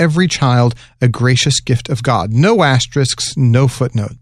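No technical faults can be heard anywhere in the recording; the signal stays continuous and steady throughout.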